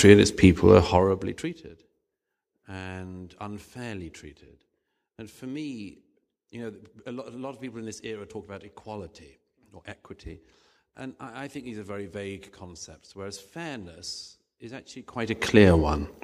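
A gain control that updates in coarse steps about a hundred times a second, with no smoothing between them, causes zipper noise twice in this speech. From 0.70 to 1.71 s the level falls by roughly 25 dB, and every jump leaves a tiny click, so a fast ticking buzz rides over the voice. From 15.01 to 15.57 s the level climbs back by roughly the same amount in steps of about 1 dB, and that zipping returns.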